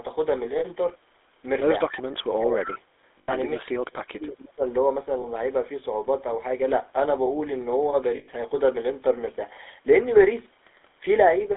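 Throughout, the speech carries the buzzy, gravelly roughness of the GSM full-rate codec, confined to about 300 Hz to 3.6 kHz. That band and grain fit 13 kbps coding, distinct from a plain band-limit's clean muffling. Lost GSM frames at 0.58, 3.18–3.34, 5.22 and 8.16–8.29 s hold the last sound as a metallic ring, not a silent gap, for 40, 100, 20 and 120 ms. From 2.35 to 2.68 s the speech dips by roughly 25 dB, and from 3.56 to 4.63 s by roughly 35 dB. This is likely speech suppressed in double talk, a pumping cut unlike a frame loss's ring. At 2.66–2.79 s a likely echo leak returns a copy 260 ms late at about 10 dB down, a discrete repeat rather than room reverberation.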